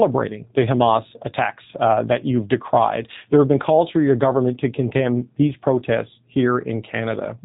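It's a speech recording, and the whole thing has gone through the G.729 codec, with plainly audible damage from start to finish. Nothing gets through above about 3.8 kHz, so it has that boxed-in telephone sound. The voice also comes out slightly rough and synthetic, because the codec rebuilds it from a vocal tract model, a pitch predictor and a few pulses per frame rather than keeping the waveform. The roughness fits an 8 kbit/s setting.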